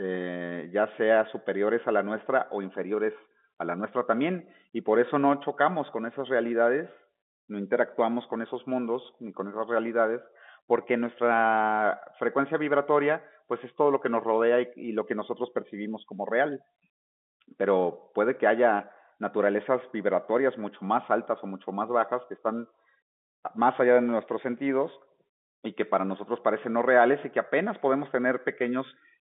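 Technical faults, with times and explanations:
Nothing stood out on listening; the speech carries the narrow, telephone-band character of G.711 telephone coding, which is working as expected here.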